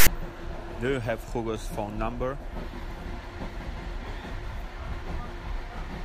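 A harsh, buzzing rasp opens the speech clip, running from 0.00 to 0.07 s, pushed hard to one side and cut off abruptly, then dropping into dead silence before the speech begins. This is file tags played as audio: a block of text tags at the head of the file was read as sample values, the text bytes producing the lopsided rasp and the zero padding that follows them giving the hard-edged silence.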